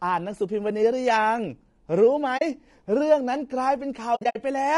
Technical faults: low-delay AAC compression; AAC frame loss with muting

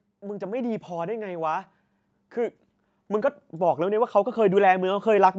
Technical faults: automatic gain rising

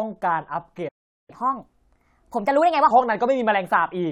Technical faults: playback stall; catch-up at higher speed

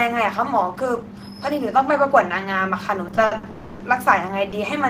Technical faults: repeated stalls (stutter); call audio freeze

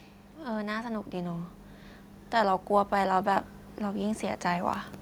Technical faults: automatic gain rising

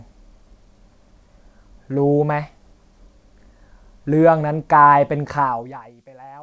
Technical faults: none

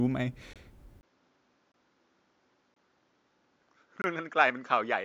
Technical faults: block of digital silence; input switched to a poorer device

